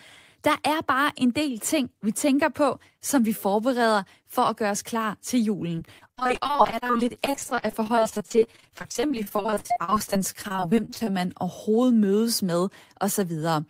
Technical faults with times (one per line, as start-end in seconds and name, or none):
5.75-11.08 repeated packet loss (robotic sound)